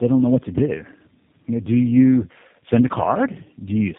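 From start to finish the speech carries tandem speech coding: two low-rate speech coders in series, the second working on the first's already degraded output, which fits an AMR-NB leg feeding G.729A across a G.711 hop. Nothing sounds above 3.7 kHz, and the roughness and warble run deeper than any single narrowband codec would leave.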